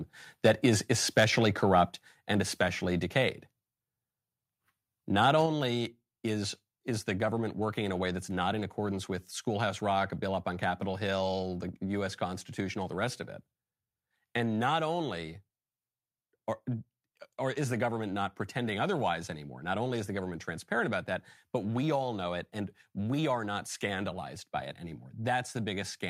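Microphone overload appears at 0.45 to 0.66 s, 1.17 to 1.25 s and 1.76 to 1.81 s, about 3, 5 and 1 dB over full scale. A likely cause is input gain set too high, so peak tops are sheared flat, giving loud syllables a harsh crackle. Microphone volume stepped down at 1.89 s, dropping speech and background together by 4 dB in one step, likely because the call software reacted to those clipped peaks. At 5.23 to 5.30 s overload recurs, about 1 dB over, and at 5.46 s the level steps down another 4 dB.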